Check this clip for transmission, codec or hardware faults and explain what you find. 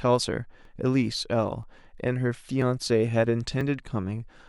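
One transmission fault stands out: overlap between stream segments, heard as a tiny skip at 0.65, 1.63, 2.62 and 3.61 s. The segments run about 1 s long. Their time stamps overlap, so the player trims sound that was never duplicated. The speech waveform jumps at each join, roughly once per second.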